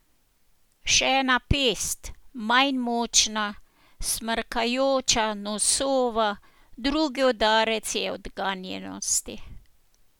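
A speech recording, with no technical faults to report. Nothing heard in it calls for a technical explanation.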